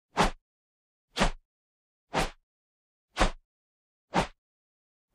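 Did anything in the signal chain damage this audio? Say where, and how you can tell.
No, no stage of the signal chain shows any damage here, so there's nothing to trace to wiring, conversion, buffering, transport or playback.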